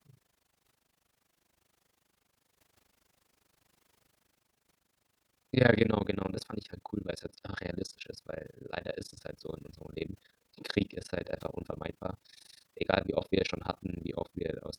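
Throughout the speech, windowed frames were overlapped and added back together at a spacing whose gains do not sum to a constant, causing overlap-add ripple. The level swings by about 60 dB around 30 times a second, chopping the sound into a harsh, fast flutter.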